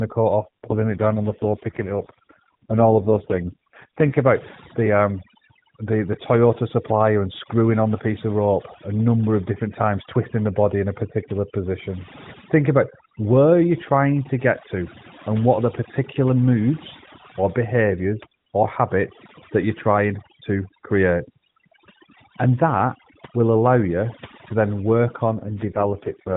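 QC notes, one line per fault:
Throughout: overdone noise removal. Aggressive spectral gating pulls bands near the noise estimate to silence, leaving twinkling specks in the background.
0.40–4.18 s and 25.37–26.36 s: AMR rate drop. The speech turns rougher and more synthetic with no gap or change in bandwidth, which fits the AMR-NB link falling from 12.2 to 4.75 kbps.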